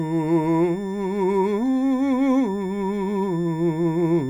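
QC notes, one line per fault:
throughout, switching supply whistle: a thin high whistle sits under the music for the whole clip, its pitch wandering slightly between 1.77 and 1.79 kHz, roughly 2 kHz in round terms, at about 30 dB below the music. A switching power supply in the chain is dropping into an audible burst mode, or beating against another supply, so its switching energy lands in the hearing range and leaks into the audio.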